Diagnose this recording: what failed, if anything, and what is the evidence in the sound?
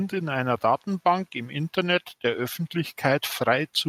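From 0.1 s to the end of the speech at 3.89 s, the talker and the room noise behind them swell upward together, steadily and without a step. That is automatic gain rising in the call processing: the AGC judged the input too quiet and kept raising its gain.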